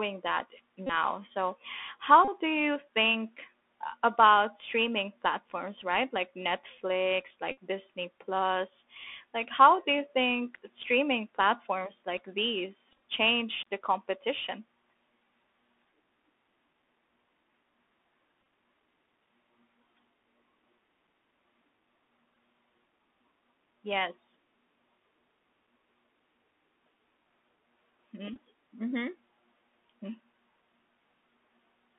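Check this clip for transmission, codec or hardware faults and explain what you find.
Two faults are present: the narrowband Bluetooth CVSD headset codec throughout, and repeated Bluetooth headset packets at seven points.

Throughout, the Bluetooth CVSD headset codec tracks the waveform one up-or-down bit at a time (the sound fits a 64 kbps link) and passes only about 250 Hz to 3.5 kHz. The speech is muffled, with scratchy sibilants and granular hiss.

Bluetooth headset packet repeats occur at 0.87, 2.25 (just before "do you think about"), 7.52, 12.91 (just before "change the competition"), 18.41, 22.35 and 28.34 s. Each time, lost packets were replaced by replaying the previous one, which produces brief buzzing near 267 Hz, with about 11 to 75 ms of audio lost per event.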